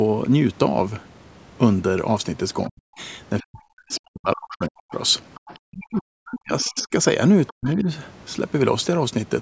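At 2.64 to 2.69 s a brief second voice appears under the speech, roughly 30 dB down. This is the other side's voice leaking through, likely far-end loudspeaker sound that the echo canceller did not fully remove from the microphone. It returns at 3.40 to 3.96 s and 5.35 to 5.59 s at roughly 25 dB below the speech, at 6.61 to 6.84 s at roughly 20 dB below, and at 7.47 to 7.71 s at roughly 25 dB below. It sounds faint.

Overlapping these leaks is speech suppressed in double talk, likely the echo canceller attenuating the near-end talker because it cannot separate that voice from the loudspeaker echo. From 2.69 to 4.94 s the speech dips and cuts out in pieces, for roughly one and a half seconds in total, with the deepest drops around 40 dB. The same gating recurs from 5.62 to 6.92 s, for about a second in total, and briefly from 7.50 to 7.87 s. In each case the voice sounds partly muted.

Above 8 kHz there is no content, which fits the call path's microphone processing.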